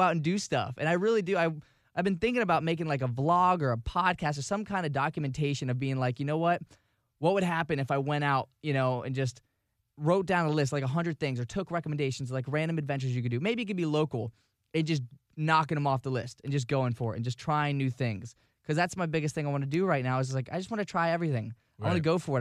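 A speech recording with nothing technically wrong with it.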